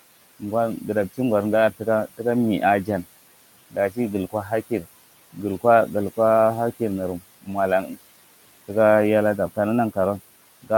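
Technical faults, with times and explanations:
Throughout: noise suppressor artifacts. The suppressor pulls down the bands it judges to be steady noise by about 17 dB, frame by frame, so the room noise, which sits about 18 dB under the speech, sinks in the gaps and comes back under each phrase. Unlike plain room noise, this pumping follows the speech.
3.71–3.98 s, 4.32–4.52 s and 7.84–7.97 s: speech cut by the noise suppressor. In each span the suppressor mistakes quiet parts of the speech for noise and turns them down with the background, by up to about 15, 13 and 11 dB. About a tenth of a second is affected in each of the first two, a little more in the third, so the sounds there seem swallowed or faint. Unlike a dropout, the audio never goes silent.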